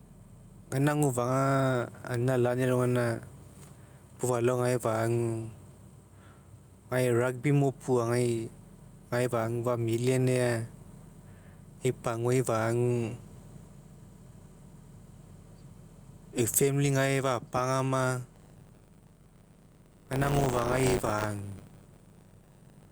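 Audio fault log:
throughout, gain pumping: The input gain is likely set far too high, with a fast limiter pulling it down on every loud moment. The gain swings by about 10 dB, ducking under each loud syllable, leaving the speech squashed and breathing.
18.33 to 22.92 s, buffer tearing: The writing program and the hardware reading the ring buffer have slipped, crossing inside every period. Around a tenth of each buffer replays audio roughly 30 ms old, and the hard joins produce a 100 Hz robotic buzz that follows the speech.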